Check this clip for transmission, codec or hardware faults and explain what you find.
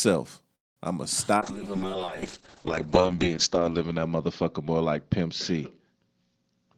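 Three faults are present in this speech clip: a call audio freeze, a call bitrate drop and a jitter buffer speed-up.

From 0.55 to 0.79 s there is a call audio freeze. The sound stops into about 210 ms of silence, then resumes where it left off, with nothing skipped. This is likely a delayed packet stream that emptied the jitter buffer, inserting a gap.

From 1.37 s to the end there is a call bitrate drop. The audio turns coarse and muffled as the top end disappears, with bandwidth falling from about 20 kHz to 8 kHz. That fits the encoder rate falling from around 40 kbps to 6 kbps, staying at its lowest for roughly two seconds.

From 6.35 s to the end there is a jitter buffer speed-up. The speech runs about 15% faster at unchanged pitch and sounds hurried. The receiver trims short pitch-period slices, roughly 70 ms in total, to shrink an overfull buffer.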